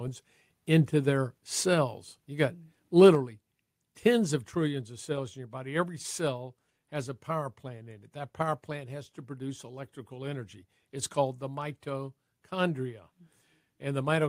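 From 3.04 to 3.09 s a loud peak turns harsh and crackly, with its tops flattened; this is likely microphone overload, input driven about 2 dB past the converter's limit. At 3.15 s the speech and background drop suddenly by about 5 dB, likely the microphone volume stepped down by call software reacting to that clipped peak.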